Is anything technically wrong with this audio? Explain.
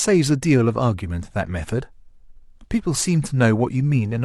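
No, nothing stood out as technically wrong on listening to this speech recording.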